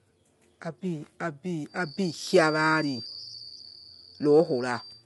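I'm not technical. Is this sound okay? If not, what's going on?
No. Throughout, the speech sounds rough and grainy, with noise between its tones and nothing above about 11.6 kHz. That is low-delay AAC compression, likely from a video-call codec squeezing the audio. Unlike background hiss, the roughness follows the voice itself.

From 1.63 s to the end, a thin, steady whistle at about 4.6 kHz sits well beneath the speech, swelling and fading slowly. This feedback whistle is likely a speaker-to-microphone loop near the edge of feedback. Unlike a howl, it never builds up louder.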